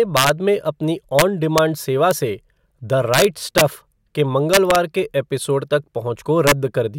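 Speech with integer overflow: loud peaks wrap to the opposite sign, producing violent cracks at 0.17–0.29, 1.19–1.22, 1.58, 2.11, 3.14–3.61 (worst, about 4 dB over), 4.54–4.76 and 6.47–6.52 s. The waveform shows sudden sign flips, and the spectrogram shows broadband vertical streaks.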